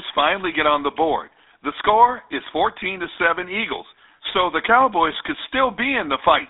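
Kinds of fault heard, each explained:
GSM full-rate codec: throughout, the speech is confined to a telephone band of roughly 300 Hz to 3.7 kHz with nothing above 3.8 kHz, and a plainly audible buzzy, gravelly roughness, consistent with a 13 kbps coder that models the vocal tract and excites it with sparse, regularly spaced pulses.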